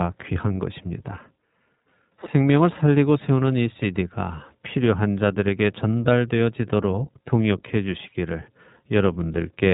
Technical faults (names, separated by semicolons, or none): iLBC codec